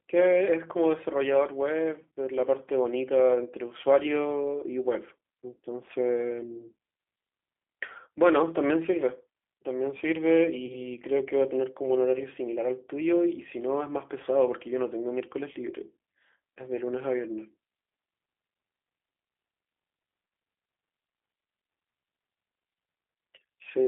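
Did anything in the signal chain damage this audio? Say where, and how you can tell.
Yes. At the codec stage, the whole 24-second speech clip carries G.729 coding damage that is plainly audible. The voice sits in a telephone band of roughly 300 Hz to 3.4 kHz, and it has a rough, slightly synthetic texture. That texture comes from a coder that does not send the waveform. It sends a vocal-tract filter, a pitch predictor and a few sparse pulses per frame, which fits an 8 kbit/s G.729A stream.

At the network stage, VoIP packet loss concealed by the speech codec damages the audio from 10.66 to 10.88 s. About 30 ms of the stream is missing, which fits a single lost packet. The decoder filled that gap by repeating its last pitch and filter settings with falling gain, so the sound smears into a fading buzzy tone or coloured noise. Each frame depends on the one before it, so the speech stays weak or distorted for tens of milliseconds or more after the gap.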